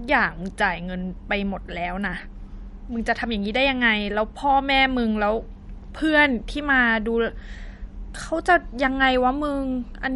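MP3 compression, likely the cause of the damage heard across the whole speech clip, from start to finish. Nothing reaches above 11.2 kHz, where the encoder has cut the treble outright to save bits. Below that, weak frequency lines drop in and out between frames, giving a plainly audible watery, swirling texture with metallic chirps on s sounds and smeared attacks. That degree of damage points to a low bitrate of around 48 kbps.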